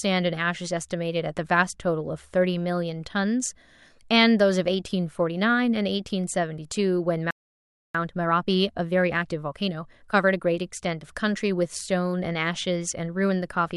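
At 7.31 s the speech cuts out in mid-flow. There is a playback stall. The output stays silent until 7.95 s, a gap of about 0.64 s. The speech then resumes. The likely cause is the player running short of data, or its playback thread being blocked for that moment. Nothing is output while it waits. The break sounds abrupt, not like a natural pause.

From 7.95 s to 10.49 s there is time-compressed catch-up. The player is working off the backlog the stall left behind. It removes short slices of the signal and cross-fades the edges together. This runs the speech at 1.25 times normal speed. Pitch stays where it was. The speech sounds hurried. Normal pacing returns after 10.49 s.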